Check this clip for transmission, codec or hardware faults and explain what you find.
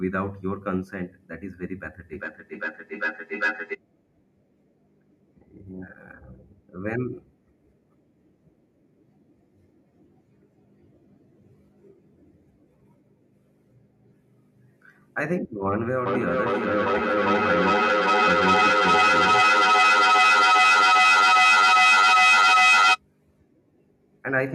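There is feedback echo between two devices, from 2.13 to 3.8 s and from 16.06 to 23.01 s. A second device replays the audio into a microphone that re-sends it. Repeats arrive roughly every 400 ms, peaking at about 1 dB, then about 9 dB, above the speech.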